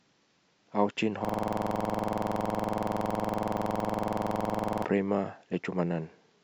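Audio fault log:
1.25–4.85 s, system hang loop: the system stalled while the audio hardware kept replaying the same stretch of its ring buffer, so one 46 ms fragment of speech repeats back to back about 77 times. At that length the repeats arrive at 21.5 per second, fast enough to fuse into a rough, machine-gun-like stutter with a steady buzzy pulse. The loop length fits a 2048-sample buffer cycling unattended until playback resumed.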